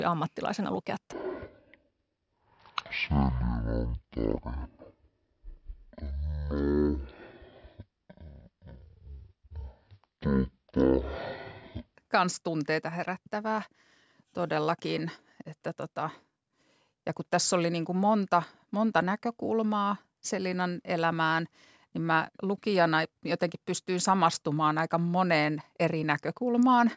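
Speech with a wrong sample rate from 1.13 to 11.95 s, after "ammattilaisena lukea": the audio plays at 0.363 times speed and 17.6 semitones low, which fits 44.1 kHz audio played at 16 kHz. A spectrogram shows harmonics compressed downward and stretched in time, and the waveform looks drawn out, until "kans tunteita herättävää".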